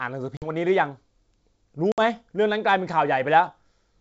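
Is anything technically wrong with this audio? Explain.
Yes. Packet loss on an ADPCM call hits twice, near 0.37 to 0.50 s and 1.92 to 2.00 s. About 50 ms and 60 ms of packets vanish, leaving hard-edged silences. The decoder's predictor and step size then drift from the sender's, so the speech resumes with brief, slight distortion.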